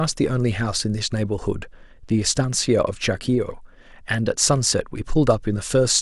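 No technical faults can be heard anywhere in this recording.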